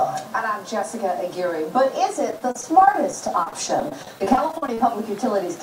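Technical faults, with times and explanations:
2.31–4.80 s, repeated packet loss (robotic sound): about two dozen brief dropouts, the longest 41 ms, are each patched by stretching the preceding sound. Around 17% of the span is filled this way, so it sounds choppy. The spectrogram shows smeared, copied slices, and the waveform shows abrupt joins.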